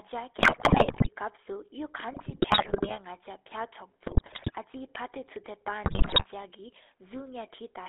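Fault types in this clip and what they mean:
GSM full-rate codec: The speech passes through a coder that models the vocal tract and excites it with sparse, evenly spaced pulses, in a band of about 300 Hz to 3.5 kHz. The result is a plainly audible buzzy, gravelly roughness, which fits 13 kbps full-rate coding.
GSM bit errors: Corrupted bits reach the decoder and scramble its filter, pitch and gain values for whole frames. The speech breaks into squawks, pops and gargling from 0.4 to 1.09 s, 2.13 to 2.98 s, 4.06 to 4.55 s, and most severely from 5.84 to 6.26 s.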